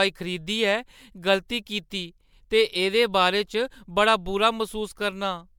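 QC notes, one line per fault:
throughout, generation loss: the speech sounds swirly, hollow and smeared, with blurred consonant attacks, worse than one 128 kbit/s MP3 pass would explain. Likely about four MP3 re-encodes, each quantising afresh on a shifted frame grid, so noise and spectral holes pile up.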